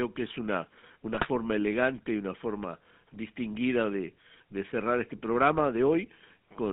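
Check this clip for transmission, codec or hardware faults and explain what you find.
Two faults are present: GSM full-rate codec damage throughout and a burst of GSM bit errors.

GSM full-rate codec: The whole clip sounds buzzy and gravelly. Pulse-driven vocal-tract coding causes this, which fits 13 kbps full rate. The band is limited to 200 Hz to 3.5 kHz.

GSM bit errors: From 1.14 to 1.27 s the speech breaks into squawks and gargling. Corrupted filter, pitch and gain values distort those frames, which fits about six damaged frames.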